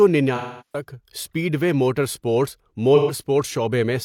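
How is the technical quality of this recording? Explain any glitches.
Two dropouts break up the speech. Both are AAC frame loss with concealment. From 0.35 to 0.83 s, about 340 ms of coded audio is missing. The decoder rebuilds it from the last good spectrum, so the sound smears into a noisy, hollow wash and fades toward silence before recovering. From 2.95 to 3.12 s, a shorter gap of about 130 ms produces a brief phasey, blurred patch instead.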